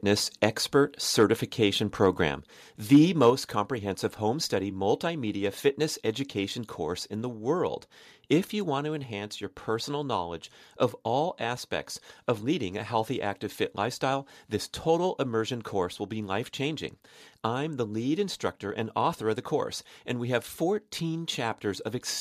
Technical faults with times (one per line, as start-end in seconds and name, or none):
1.20-1.24 microphone overload
2.28 microphone volume stepped down
2.93-3.29 microphone overload
3.30 microphone volume stepped down
8.79 microphone volume stepped down